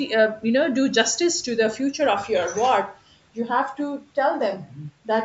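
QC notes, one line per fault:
Nothing to flag on this speech clip: it has been through a call's usual microphone processing, which trims the lowest bass and leaves nothing above 8 kHz, and that is simply how that path sounds.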